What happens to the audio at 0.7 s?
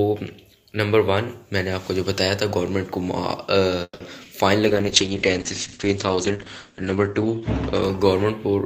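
Nothing goes wrong at 0.7 s; the audio plays through that moment intact, with no dropout, click or distortion.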